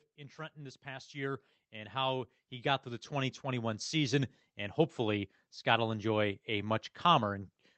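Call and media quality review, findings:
Automatic gain rising, 0.15 to 4.87 s. Speech and background noise swell together by about 16 dB over nearly 5 s. Probable component: AGC on the capture path. It judged the input too quiet and ramped its gain up slowly.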